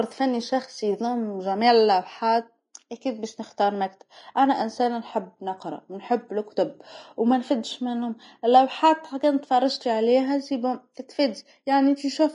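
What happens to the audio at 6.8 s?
At 6.8 s the speech sounds hissy and grainy, with roughened tones, smeared consonant attacks and nothing above 10.6 kHz, as throughout the clip. This is likely Vorbis compression at a low bitrate, around 30 kbps, quantising the treble so coarsely that fine detail turns to noise.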